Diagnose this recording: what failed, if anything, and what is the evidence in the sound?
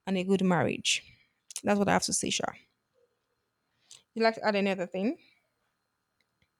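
The failure sits at the driver or buffer stage, where two devices meet. Right after "and a good marriage", at 1.07 s, a click appears in the speech and recurs every 1.46 s until about 5.46 s, roughly four times. The steady spacing points to clock drift buffer slips, likely from two independent clocks disagreeing by something like 150 ppm, so a handful of samples is dropped or repeated at each slip. On a waveform each slip is a discontinuity; on a spectrogram it is a broadband vertical line at the same interval.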